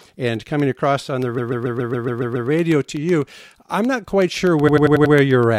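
Regular tiny ticks sound through the audio from 0.10 s to 5.43 s, one every 0.125 s, roughly thirty in all. These are periodic USB or driver dropouts: at a fixed interval something stalls the bus or audio driver, and a sliver of signal, well under a millisecond, is lost and replaced by silence.

From 1.37 s to 2.49 s the sound stutters, one 139 ms stretch playing again eight extra times. A second stutter from 4.67 s to 5.13 s loops a 93 ms stretch five extra times. These are repeated frames: a run of compressed frames was written or sent more than once, and the decoder played it again each time. The block lengths point to a short run of several frames. The repeats add about 1.11 s and 0.46 s to the audio.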